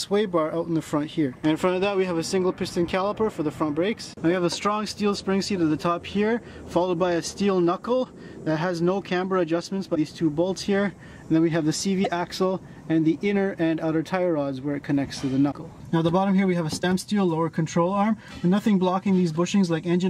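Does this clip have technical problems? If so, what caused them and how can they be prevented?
Yes. Short glitches of about 30 ms, heard as a chirp, a burst of noise or a brief hole, each with a jump forward in the sound, occur at 1.32–1.35, 8.03–8.06, 9.94–9.97, 12.03–12.06, 15.51–15.53 and 16.81–16.84 s. Each spans roughly one 26 ms MP3 frame, which points to a likely broken MP3 bit reservoir: frames were lost, so the next frame decoded its borrowed bits from the wrong data. To prevent this, cut or join MP3 files only with frame-aware tools that keep the bit reservoir intact, or edit the decoded audio and re-encode it.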